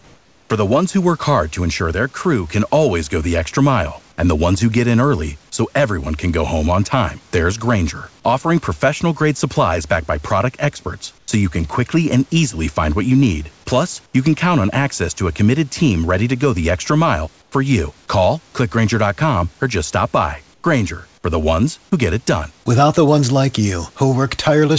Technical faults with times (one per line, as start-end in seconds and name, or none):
0.00-0.50 comfort noise in place of the background
11.18-11.28 comfort noise in place of the background
14.06-14.14 comfort noise in place of the background
17.42-17.52 comfort noise in place of the background
20.54-20.64 comfort noise in place of the background